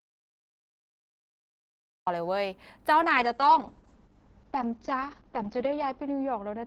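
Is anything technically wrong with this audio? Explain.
Yes, there are two faults. From the very start until 2.07 s there is an audio dropout to silence: the input was likely lost, through a disconnect, link failure or mute, while silence kept being written. The waveform is a flat line and the spectrogram is blank, with no room tone.

From 3.03 s to the end there is a call bitrate drop, from 32 to 8 kbps, held at its lowest for about 2.7 s. The Opus encoder codes more coarsely and its bandwidth shrinks from 20 kHz to 8 kHz, so the speech turns rough and muffled, and the spectrogram loses everything above 8 kHz.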